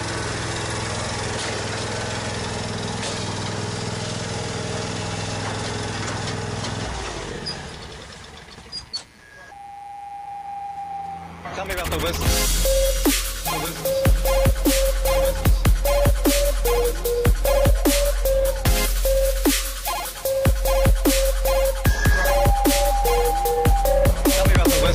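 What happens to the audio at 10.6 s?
At 10.6 s the mains buzz runs on as everywhere else: 60 Hz switching spikes spray harmonics into the kilohertz range, a raspy buzz about 30 dB down rather than a smooth hum.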